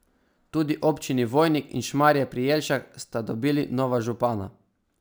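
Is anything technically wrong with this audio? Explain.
Yes, there's a crude rate conversion problem running through the whole speech clip. The fizz points to a 32 kHz to 48 kHz conversion by plain sample repetition with no filter: one in every three output samples is just a copy of its neighbour. That uneven 3:2 stepping adds shifted, inharmonic copies of the speech, sitting roughly 25 dB below it. You hear a gritty buzz that rides along with louder and brighter syllables.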